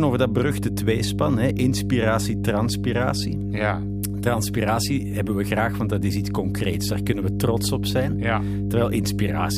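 A steady low drone sits under the speech from start to finish, pitched at 50 Hz with a few low harmonics above it, and it is roughly as loud as the speech itself, so it never drops into the background. This is mains hum: the 50 Hz power line has leaked into the signal path, typically through a ground loop between connected equipment or magnetic pickup from a nearby transformer.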